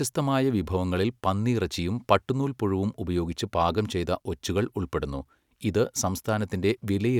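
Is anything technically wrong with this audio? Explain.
No, nothing technically wrong can be heard in this speech recording.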